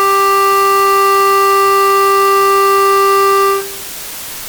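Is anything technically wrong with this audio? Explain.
Yes, the whole music clip suffers from low bit depth with dither. It sounds like only 4 bits, with dither added before rounding, so the quantisation error turns into a steady, even hiss sitting roughly 15 dB below the music, with no gritty distortion.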